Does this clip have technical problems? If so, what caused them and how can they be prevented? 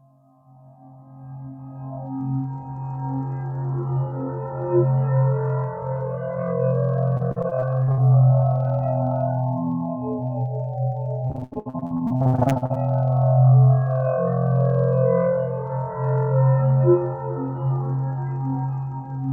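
Yes. Repeated packet loss (robotic sound) occurs from 7.17 to 7.99 s and from 11.27 to 12.77 s. Lost stretches up to 79 ms are patched by extending prior sound, roughly half the second span, giving choppy audio. A larger jitter buffer with redundancy prevents this.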